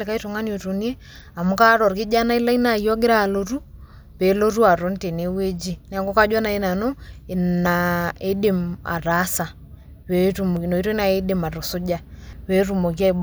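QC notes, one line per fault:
7.66 s, 10.57 s (just before "inoitoi nai idim atusuja") and 12.33 s (just after "inoitoi nai idim atusuja"): dropped buffer (overrun). Each is a jump where the speech skips forward by roughly 50 ms with no gap, likely because samples were not read out before the capture hardware overwrote them. On the waveform, each shows as a sudden discontinuity with no silence. On the spectrogram, each is a thin vertical broadband line where the harmonic pattern shifts abruptly.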